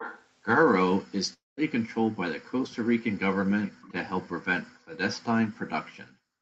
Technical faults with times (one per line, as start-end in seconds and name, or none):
0.00-0.26 echo leak
1.33-1.60 long network dropout
2.64-2.76 echo leak
3.49-3.93 echo leak
4.07-4.14 speech suppressed in double talk
4.70-4.97 background gated by the echo canceller
5.43-6.41 background gated by the echo canceller